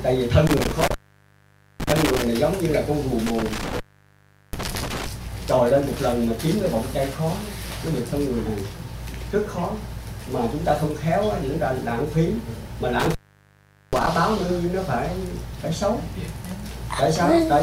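Intermittent contact at 0.47–2.27 s, 3.27–5.07 s and 13.00–14.07 s: a loose connection opens for about 0.86, 0.74 and 0.78 s, dropping the sound to faint hiss with crackle at each edge.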